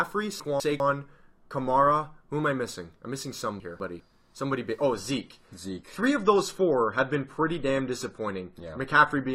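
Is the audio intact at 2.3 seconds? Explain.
Yes, the speech at 2.3 seconds plays through intact, with no audible dropout, click, distortion or other fault at that moment.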